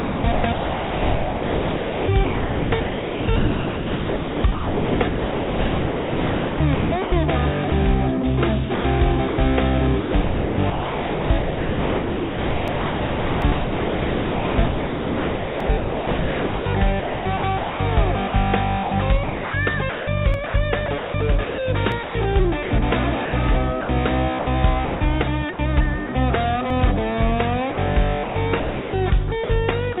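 From 0.0 to 7.12 s the sound is chopped by the voice detector. The sender likely kept cutting in and out, and about 6.2 s became flat comfort noise. At 7.7 s the voice detector likely drops the sound for 20 ms, a brief gap filled with steady noise. From 8.74 to 9.38 s the chopping returns, with about 0.2 s replaced.

From 10.0 to 21.58 s the chopping is heaviest. About 7.9 s is comfort noise. Inside and after this stretch come dropped buffers (overrun), at 12.68, 13.42, 15.60, 20.34, 21.92 and 26.70 s. Samples were likely overwritten before being read, and the two sides were joined directly. Each is a jump ahead. The jumps at 13.42 and 15.60 s are about 50 ms, and the others about a tenth of a second.

More voice-detector chopping follows from 22.03 to 22.71 s, 23.25 to 25.01 s, 25.53 to 26.09 s and 27.72 to 29.50 s. These replace roughly 0.2, 0.4, 0.08 and 0.6 s with comfort noise. Throughout, the call codec's narrow band leaves nothing above 4 kHz.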